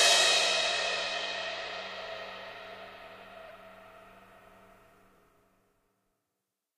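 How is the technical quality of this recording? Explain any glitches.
Two short glitches interrupt this sound recording, both brief decoding or delivery faults.

From 3.45 to 3.51 s a corrupt frame was decoded: damaged bits in roughly three consecutive compressed frames were played as if valid, so misread gains and codes placed energy at wrong frequencies. The result is a quick chirp or noisy blip lasting about 60 ms. On a spectrogram it shows as a small block of unrelated energy with sharp vertical edges at the frame boundaries.

At 5.14 to 5.18 s chunks play out of order: a 10 ms chunk arrived late and was played three chunks after its proper place, so the following chunks come first and the stray one is spliced in behind them. Nothing is missing, but the sound briefly jumbles. The waveform shows three abrupt discontinuities within about 40 ms where segments fail to line up.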